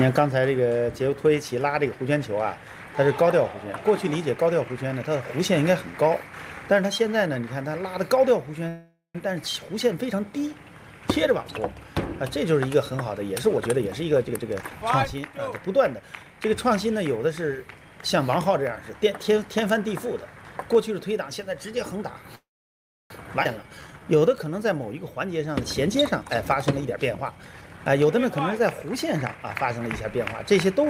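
At 8.68 to 9.16 s there is a call audio freeze. Packets were likely held up and the jitter buffer ran dry, so about 0.46 s was filled with the last sound fading away, including about 0.14 s of silence. The sound then resumes where it stopped.

From 13.29 to 16.42 s there is a jitter buffer speed-up. The buffer had grown too full, so the receiver trimmed short pitch-period pieces, roughly half a second in total. The sound runs at 115% speed with the same pitch and feels hurried.

At 22.35 to 23.11 s a second call audio freeze follows, likely from another delay in packet arrival. About 0.75 s is inserted, most of it (about 0.66 s) silence, before the sound carries on.

At 23.43 to 23.46 s the sound skips ahead. Audio was dropped while later audio was already waiting, and roughly half a second is lost, with the two sides joined almost seamlessly.

From 23.63 to 24.56 s there is a jitter buffer slow-down. 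Running low or having just raised its target delay, the buffer built up a reserve by repeating pitch periods, adding 141 ms. The sound drags at 86% speed with unchanged pitch.

From 25.87 to 29.41 s another jitter buffer speed-up removes roughly half a second of excess buffered audio. The sound is rushed at 113% speed with the same pitch.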